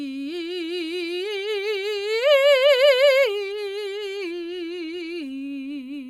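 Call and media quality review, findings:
Clock slip clicks, 0.11–6.06 s: faint regular ticks about every 50 ms through the music, around a hundred in all, single-sample each. Likely unsynchronised clocks between two devices, an offset near 400 ppm, dropping or repeating one sample per slip.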